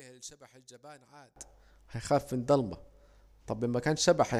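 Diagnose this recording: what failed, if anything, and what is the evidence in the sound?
One channel inverted, most likely a reversed-polarity leg in the analogue wiring, cancels the speech when the two channels sum to mono. From 0.00 to 1.36 s the centred voice drops by about 25 dB to a faint residue, returning at full level with "هيخاف في الضلمة".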